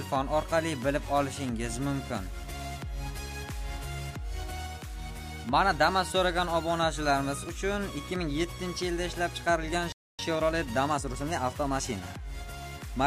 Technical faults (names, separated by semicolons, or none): playback stall; time-compressed catch-up